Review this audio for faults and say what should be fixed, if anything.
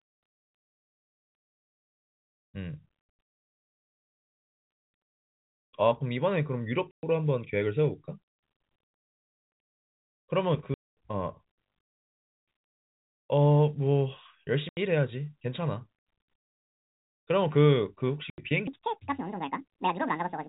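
Packet loss filled with silence chops the speech with abrupt dropouts with hard edges. They fall at 1.45 to 1.73 s (about 200 ms missing, scattered across 280 ms), 3.01 to 3.47 s (290 ms scattered over 460 ms), 6.91 to 7.03 s (120 ms), 10.74 to 10.95 s (230 ms), 14.69 to 14.77 s (80 ms) and 18.30 to 18.38 s (80 ms). The holes come in whole multiples of roughly 10 ms, which fits 10 ms packets. The receiver played silence for each packet that never arrived. Prevent it with a jitter buffer plus packet loss concealment, or forward error correction on the link.

Processor overload crackle appears from 11.80 to 12.34 s as a gritty, tearing crackle riding on the speech. Around ten audio deadlines were missed in a row. Each miss repeated a fragment of old audio with hard edges, and the spacing suggests buffers of roughly 10 ms. Together the misses form a rough burst that stops once the load eases. 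Give the audio thread real-time priority, or use larger buffers so the processor never falls behind.

A section at the wrong speed runs from 18.67 s to the end. The audio suddenly becomes hurried and chipmunk-like, playing 1.81 times too fast and raised by about ten semitones, because speed and pitch shift together. The likely cause is a player or editing step applying the wrong clock rate to this final stretch, while the G.711 telephone coding still gives the usual 4 kHz narrowband sound. Prevent it by keeping the sample rate consistent across every edit and playback stage.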